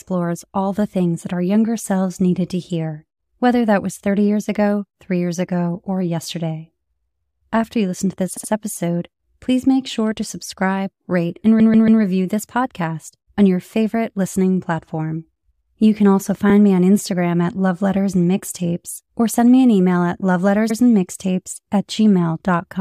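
Repeated frames stutter the speech at 8.36, 11.59, 16.49 and 20.69 s. Compressed blocks of 70, 139, 23 and 70 ms were written again, so the decoder replays each, up to three extra times. The block sizes fit frames of about 23 ms.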